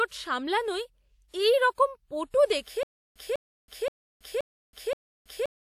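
Around 1.28 to 1.34 s there's pre-echo: a transform codec's block noise leaks about 54 ms ahead of a sharp attack, so you get a short hiss and a smeared onset.

From 2.83 s to the end there's stutter with silent gaps. The same 200 ms burst of speech repeats every 525 ms with about 325 ms of dead silence between, likely a stalled stream replaying its last fragment.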